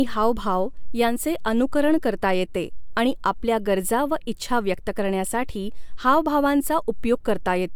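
Nothing in this bit of speech stands out as a technical fault, so there's nothing to point to along the way.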